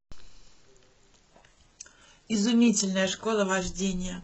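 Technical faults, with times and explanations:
1.31 to 4.23 s, adaptive stream at a lower bitrate: The speech abruptly takes on more codec artefacts, with no gap. This fits a switch to a very low-bitrate stream near 12 kbit/s.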